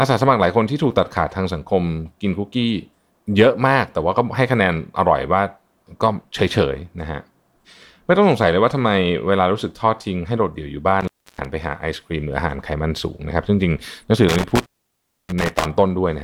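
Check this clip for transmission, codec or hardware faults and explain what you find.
Two dropouts from an intermittent contact break up the speech. The first spans 11.01 to 11.45 s, with the line open for about 310 ms. The second runs from 14.29 to 15.67 s, open for about 630 ms. A loose cable or plug briefly loses its connection, so the signal path breaks. The audio cuts out suddenly. Crackle marks the edges as the contact scrapes open and shut. Faint hiss remains during each gap.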